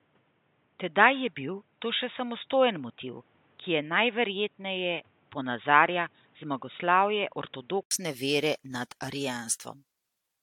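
It's a speech clip, and two things stand out. For the first 7.91 s the sound is dull and boxy, with nothing above 3.8 kHz and a faint new noise floor about 40 dB under the speech. Then there's an 80 ms gap, and it opens up again at about the same level. That's an input switched to a poorer device, likely a headset call profile or a second mic, switching back to the better one. On top of that, the whole clip has a swirly, hollow smear with softened attacks and a top end stopping at 18.7 kHz, more damage than a single AAC pass around 80 kbit/s should leave. That's generation loss, likely from the audio being re-encoded around five times, with each pass quantising on a shifted frame grid so the holes and noise pile up.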